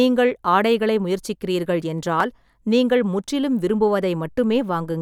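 At 2.20 s, between "ஆடைகளை முயற்சிக்கிறீர்கள்" and "நீங்கள் முற்றிலும்", there is a repeated buffer. Fresh audio reached the output too late, so the last block of about 5.3 ms, which fits a 256-sample buffer, was played a second time. Because the block is so short, the speech does not audibly stutter. Instead there is a click or brief buzz from the hard joins, and about 5 ms of the speech is lost. Unlike a dropout, the gap holds a copy of the speech rather than silence.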